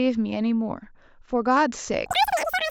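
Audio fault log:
2.06–2.71 s, wrong sample rate: the final stretch of speech suddenly runs three times too fast and jumps about 19 semitones higher, squeaky and hurried. Speed and pitch shift together without conversion, which fits 16 kHz audio played back at 48 kHz.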